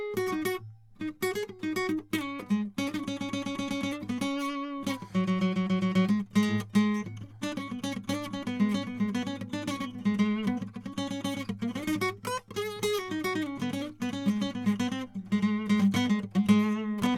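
The music comes across with a steady, continuous signal, with no audible breaks, glitches or unexpected changes in level or tone at any point.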